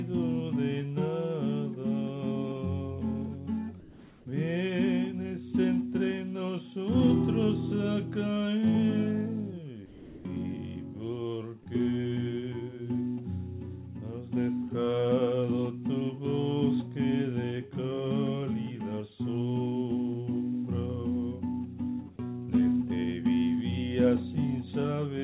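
From 3.8 to 4.25 s the background, sitting about 24 dB below the loudest passages, is replaced by comfort noise for 450 ms. The real ambience, with its texture, gives way to a smooth, featureless hiss about 2 dB quieter, then returns. This is likely discontinuous transmission. The sender stopped transmitting when its detector judged the moment to be background, and the receiver synthesised noise shaped roughly to match.

At 9.86 s there is sound dropped by the voice detector. Sound is cut for 390 ms, until 10.25 s, and about 310 ms of real audio is lost under steady synthetic noise before the signal resumes. The likely cause is the detector misreading low-level sound as background and halting transmission, so the receiver filled the gap with comfort noise. Throughout, nothing is present above 4 kHz, consistent with a G.711 call path at 64 kbps.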